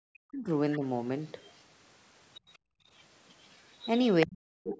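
From 0.26 to 0.83 s the talker's level sinks in patches, about 40 dB at its deepest and roughly 0.3 s in all. This is speech suppressed in double talk, likely an echo canceller ducking the talker while both sides spoke. Unlike gating, the voice itself collapses, not just the room. A faint second voice overlaps at 0.72 to 0.77 s.

That overlap is the other side's voice leaking through, likely loudspeaker echo the canceller left behind. It returns at 1.42 to 1.53 s (about 30 dB down), 2.35 to 2.56 s (about 25 dB down), and most plainly from 3.29 to 4.26 s, only about 10 dB under the talker. It is a separate voice, not a dip.

From 2.58 to 2.89 s the room background drops by about 31 dB for roughly 0.3 s, then recovers. This is background gated by the echo canceller. Only the ambience vanishes.

From 4.25 s to the end, speech suppressed in double talk returns, likely the same ducking. The talker drops by about 40 dB for roughly half a second, starting just as the leaked voice ends. 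Throughout, nothing sits above 8 kHz, which fits the call's normal microphone path.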